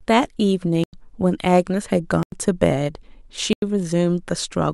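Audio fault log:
0.84–0.93 s, 2.23–2.32 s, 3.53–3.62 s: block of digital silence, three 93 ms holes where the sound cuts out. This fits a 4096-sample block, and the edges are abrupt.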